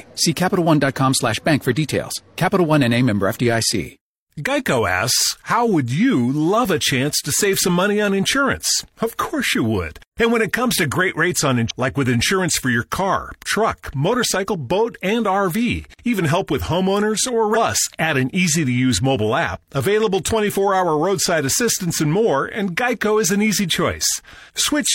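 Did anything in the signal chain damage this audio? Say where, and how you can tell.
Yes. Damaged data in a compressed stream at the codec stage. Short blips at 11.66–11.71 s, after "to great rates on", and at 17.51–17.57 s, after "help with homeowners or". Corrupt frames knocked the decoder out of sync.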